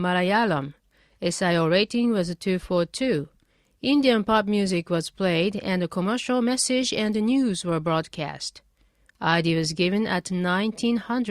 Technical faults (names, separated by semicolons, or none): none